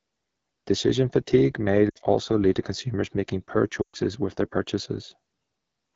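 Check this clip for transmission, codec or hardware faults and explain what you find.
Two kinds of fault are present: low-rate wideband codec damage throughout, and two gaps from lost speech frames.

The whole clip carries the AMR wideband (HD Voice) codec at a rate where its damage is plainly audible. The speech sounds rough and raspy, which fits one of the lowest AMR-WB modes, around 8.85 kbit/s. At this rate the pulse-driven vocal tract model below 6.4 kHz has too few bits to describe each frame accurately, and the top band up to 7 kHz is filled with shaped noise.

Lost AMR speech frames occur twice. From 1.90 to 1.98 s, just before "also lead to consumers", about 60 ms is concealed, which fits three lost 20 ms frames. From 3.82 to 3.96 s, between "to consumers making poor" and "with their", about 120 ms is concealed, which fits six lost frames. When frames fail their checksum, the decoder reuses the last good pitch and vocal tract settings while lowering the gain. 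The shorter gap drops to near silence within two frames. The longer one also drops to near silence within two frames before the speech returns, briefly weak or rough.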